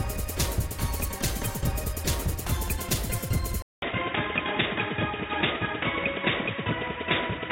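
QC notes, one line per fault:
3.62 s to end: input switched to a poorer device. After a gap of about 200 ms the sound turns abruptly duller and boxier, with nothing above 3.8 kHz, and a new background noise floor appears, roughly 45 dB below the signal. The level stays much the same. The likely cause is the recording input changing mid-capture to a narrower-band microphone or a headset call profile, which brings its own tone colour and noise.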